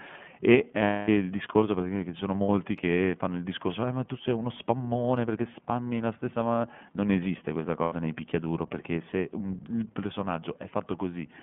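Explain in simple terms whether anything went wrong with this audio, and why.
The call ran through the iLBC codec, a narrowband phone codec that packs the speech into short, self-contained chunks, consistent with 30 ms frames, and discards everything above about 3.4 kHz and below about 150 Hz. Throughout the speech, that missing top end makes it sound muffled and boxy. The squeezing also leaves a plainly audible rough, slightly synthetic edge, like a robotic grain over the speech.

Three times, bursts of lost iLBC frames occurred: pieces of the signal never arrived, and the decoder filled the holes by repeating the last bit of sound with some noise mixed in. The longest gap runs from 0.83 to 1.09 s, about 240 ms, consistent with eight lost frames, and comes across as a held, buzzy smear before the speech snaps back. Shorter ones fall at 2.42 to 2.49 s (60 ms) and 7.82 to 7.93 s (90 ms), each a brief buzz or hiccup.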